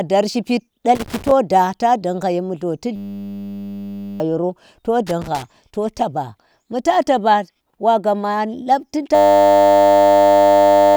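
Right after "dar shipid", from 0.95 to 1.31 s, an irregular burst of scratchy crackle is loose connector crackle, a worn contact making and breaking so the signal is chopped. From 2.96 to 4.20 s a steady buzz replaces the speech. This is a system hang loop: the system froze while the hardware kept replaying one 10 ms buffer at 100 Hz, losing about one and a half seconds of audio. The same crackle returns from 5.07 to 5.42 s. From 9.15 s to the end at 10.96 s the 100 Hz buzz of a second hang loop takes over, swallowing roughly two seconds.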